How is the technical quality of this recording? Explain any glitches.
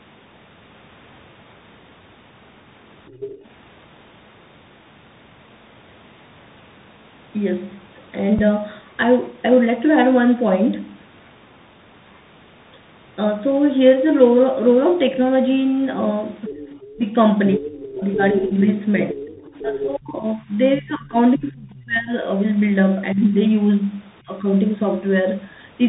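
The quality is poor: the whole recording is band-limited and rough from repeated speech coding, and the far end of the call bleeds in and knocks the talker's level down in several places.

Tandem speech coding runs through the entire clip. The call appears to have passed through CVSD coding, then G.711 mu-law, then CVSD again. Each stage re-encodes what the previous one already damaged, and the character fits 64 kbit/s links of that kind. Nothing survives above about 3.8 kHz, so the speech sounds muffled and grainy. The roughness is worse than any single codec would produce.

The other side's voice leaking through is heard from 3.08 to 3.49 s, from 16.48 to 16.91 s, and from 17.53 to 19.79 s. The likely cause is an echo canceller that failed to fully remove the loudspeaker playback from the microphone signal. A second voice sits behind the talker. It is about 15 dB down in the first two spots and about 10 dB down in the long third stretch.

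Speech suppressed in double talk occurs from 16.48 to 17.01 s, from 17.55 to 22.13 s, from 23.14 to 23.34 s, and briefly around 24.24 to 24.44 s. While both sides were talking, the echo suppression likely mistook the talker for echo and pulled the level down. The voice dips by up to about 20 dB in the first two spans and about 15 dB in the last two, with roughly three seconds affected across the long middle stretch.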